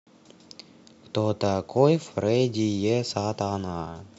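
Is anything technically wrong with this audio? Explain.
No, nothing technical stood out on listening to this speech recording.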